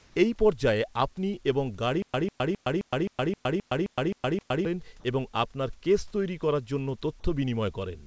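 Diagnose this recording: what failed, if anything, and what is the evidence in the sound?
Stutter with silent gaps, 2.02 to 4.65 s, at the buffer and playback stage. The same 148 ms fragment plays ten times, each followed by about 114 ms of digital silence. That gives a steady 263 ms cycle, close to four repeats per second. The player or stream likely stalled, replayed its last fragment at each retry, then ran dry. The audio that should have filled those 2.6 seconds is gone.

Sound dropped by the voice detector, at 0.0 to 0.16 s, 5.00 to 5.04 s and 7.20 to 7.24 s, in the call processing stage. Each time, the speech gives way to a short stretch of steady, featureless comfort noise, with the room noise sitting about 40 dB below the speech. The sender's detector likely mistook part of the sound for background and stopped transmitting. Roughly 120 ms is lost at the opening, and 40 ms and 20 ms at the later two points.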